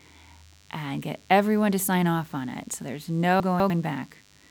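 DECT cordless phone buzz, present throughout the clip: a thin, steady buzz sits under the speech for the whole recording, well below it at roughly 35 dB down. A nearby DECT handset or base station sends a short radio burst every 10 ms. The audio circuitry rectifies each burst, producing a 100 Hz buzz whose sharp pulses carry a dense stack of harmonics. That makes it sound edgy and wiry rather than like a smooth hum.

Chunks out of order, from 3.4 to 3.7 s: the speech briefly jumbles, as if a fragment jumped position. A 100 ms block of audio landed two chunks late, so it plays after the two blocks that should have followed it. No audio is missing, but the sequence is rearranged, leaving three hard joins across that 0.3 s stretch.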